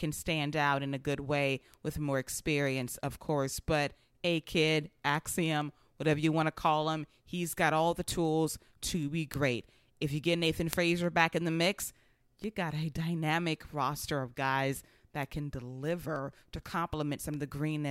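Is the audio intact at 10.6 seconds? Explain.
No. From 0.19 s to 17.87 s, word clock ticks run through the speech: the receiving device isn't locked to the sender's clock, drifting by around 150 ppm, so one sample slips roughly every 0.15 s, producing sharp ticks of uneven strength.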